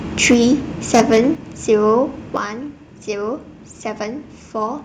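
Speech with harsh, crackling tops on the loudest syllables from 0.24 to 0.44 s and 0.94 to 1.2 s, likely microphone overload, with peaks pushed about 4 dB and about 6 dB past the converter limit and a few percent of samples flattened. Abrupt level drops of about 2 dB at 0.34 s, about 6 dB at 1.35 s and about 7 dB at 2.37 s, affecting voice and background alike, point to microphone volume being stepped down, likely by the call software reacting to the clipping.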